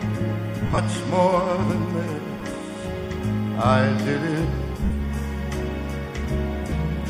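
Four short stretches of lost LE Audio frames break up the sound, at 0.66–0.78 s, 2.38–2.45 s, 4.85–4.90 s and 6.69–6.72 s. In each, the LC3 decoder concealed missing frames by repeating the last spectrum with scrambled phase, so the gap fills with a brief noisy smear instead of dropping to silence. That fill is what separates it from a plain dropout or a clipped edit. The first burst is patchy over about 120 ms, with the longest run roughly 50 ms, which fits losses of 7.5 ms frames.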